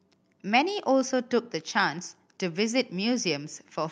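Speech clip, no technical faults heard.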